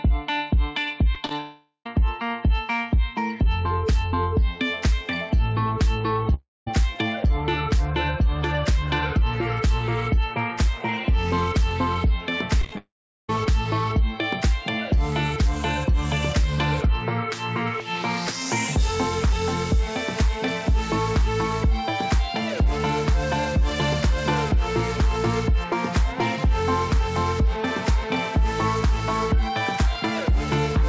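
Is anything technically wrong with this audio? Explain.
Yes. The sound is interrupted several times by packet loss on a call path, in three distinct forms.

Short concealed packet loss occurs at 1.15 s, 1.25 to 1.29 s and 1.29 to 1.31 s. Tiny pieces of the stream, 10 to 30 ms each, arrived too late to decode. The receiver bridged each hole by extending the preceding sound and then crossfading back into real audio. What you hear is a quick smear or wobble, not a gap. That brevity separates it from a dropout, where the sound actually stops.

A long network dropout is the likely cause of the breaks at 1.40 to 1.86 s, 6.34 to 6.67 s and 12.78 to 13.29 s. Each loses roughly a third to half a second of sound. The concealment carries on the last sound as a fading buzz or hiss. It then gives way to silence, about 80 ms, 200 ms and 380 ms long respectively, before the sound resumes with that stretch simply missing. 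Unlike the short losses, this is a real gap.

Repeated packet loss with a robotic sound runs from 12.61 to 12.78 s, leading straight into the third dropout. Five separate gaps, none longer than 20 ms, hit in quick succession, so about 39% of that span is patched. Each hole follows soon after the previous patch. The result is a choppy stutter rather than a single smear or one clean hole.

All of this sits on a G.722 call path, which is why nothing above 8 kHz is present.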